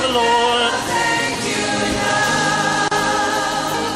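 Lost LE Audio frames at about 1.34 s: a gap of roughly 7.5 ms, which fits a single dropped LC3 frame, was filled by the decoder repeating the previous spectrum with randomised signs. The result is a brief noisy smear, too short for any fade into silence. The clip also carries light codec compression.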